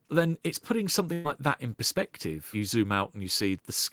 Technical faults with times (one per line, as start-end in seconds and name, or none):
1.13-1.26 burst of packet loss